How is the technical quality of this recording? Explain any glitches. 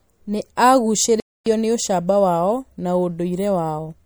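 The recording has two problems: lossy-codec damage throughout and one brief dropout.

Throughout, the speech sounds watery and swirly, with chirpy s sounds. This is likely MP3 compression at a low bitrate, fitting about 64 kbps. It differs from noise reduction because it smears and chirps rather than pumping.

From 1.20 to 1.46 s there is a playback stall. The player likely starved and went silent for about 0.26 s, then resumed at "nĩ ũcamba wao na". It is a gap, not a click, so it is not a dropout spike.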